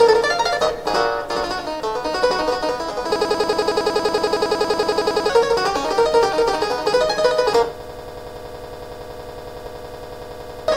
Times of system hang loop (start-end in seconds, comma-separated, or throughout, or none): 3.16-5.29, 7.80-10.68